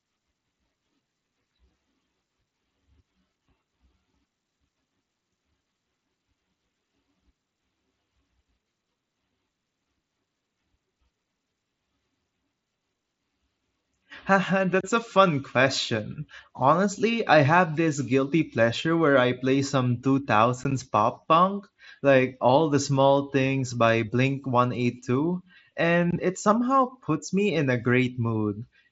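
A speech recording with one brief, hard-edged dropout at 20.64 s, just before "pop punk like": the sound cuts out for about 15 ms with abrupt edges. This is unconcealed Bluetooth headset packet loss, where lost voice packets on the mSBC wideband link were replaced by silence or an idle pattern rather than patched over.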